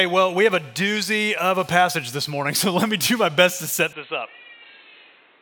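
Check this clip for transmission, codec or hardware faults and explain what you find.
From 3.93 s to the end the sound turns dull and boxy, nothing above 4.1 kHz, somewhat quieter with a new noise floor, with no gap at the change: likely an input switched to a poorer device.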